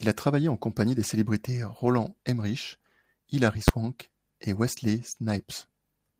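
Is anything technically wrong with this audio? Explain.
Yes, there are two faults in this speech.

Lost packet rebuilt from error correction at 1.85 s: one 20 ms packet went missing. The following packet carried a low-bitrate copy of it, and the decoder played that copy, so there is no gap. That 20 ms sounds rougher and noisier.

Invalid numbers at full scale at 3.68 s: a calculation produced infinite or invalid values, and the output was pinned at maximum amplitude for a 10 ms block. At that length it is heard as a single loud bang.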